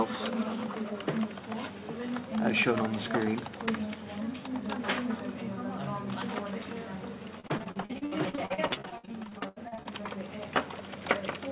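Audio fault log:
7.40–9.87 s, repeated packet loss (robotic sound): a run of short dropouts, the longest about 76 ms, with roughly a third of the stretch filled by stretching the preceding sound. The repeated patching gives a choppy texture over the 4 kHz narrowband call audio.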